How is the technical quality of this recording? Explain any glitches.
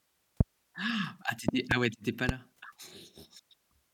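The recording has three loud pops. A sudden voltage step, likely from a plug, switch, static or driver glitch, entered the signal path, producing sharp thumps about 20 to 25 dB above the speech, which continues underneath. They fall at 0.41–0.43 s, 1.49–1.74 s (a double pop) and 2.29–2.32 s.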